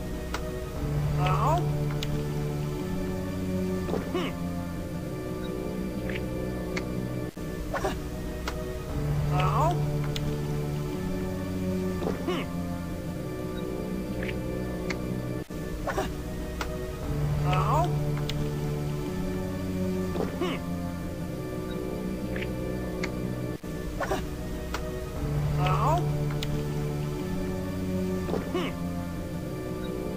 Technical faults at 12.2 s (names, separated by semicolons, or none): low bit depth without dither